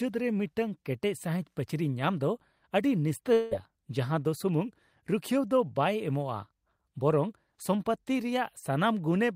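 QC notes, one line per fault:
3.33–3.53 s, long network dropout: for about 0.2 s the speech turns into a smeared, buzzy continuation of the sound just before it. It fades but never drops to silence. The audio then resumes with roughly 180 ms of material missing, likely because packets stopped arriving and the receiver filled the gap from the last frame. A spectrogram shows the harmonics frozen into a blurred, static band. The waveform shows a decaying, repetitive envelope, then an abrupt jump.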